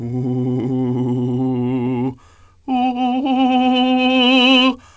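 Nothing stood out on listening to this music, which comes over a call path whose coding leaves nothing above about 8 kHz.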